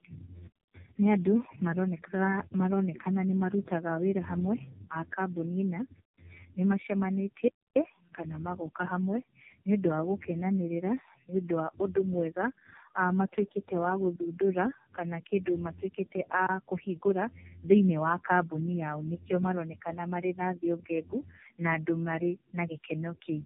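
The speech here shows tandem speech coding from start to finish. It sounds rough, muffled and warbly. The pattern fits a call crossing several network links, each with its own codec. At every handover the speech was decoded and coded again. The harshness points to three low-rate speech codecs in a row, such as iLBC followed by two passes of AMR-NB. Each coder worked on the previous one's damage, so the losses stacked.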